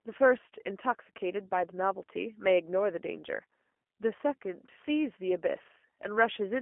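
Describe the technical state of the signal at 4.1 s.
At 4.1 s the speech carries G.729 codec damage throughout, rebuilt from a vocal tract filter and sparse pulses at 8 kbit/s. It sounds rough and synthetic, with nothing above 3.4 kHz, unlike plain band-limiting, which stays smooth.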